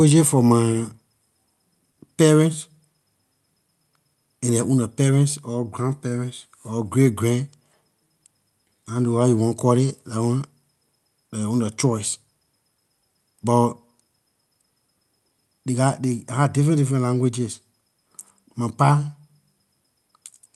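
At about 1.91 to 1.99 s there's a burst of packet loss: roughly 60 ms of speech never arrived in time, so the receiver stretched the last sound and faded it across the gap. When the speech picks up again, that missing stretch is simply gone.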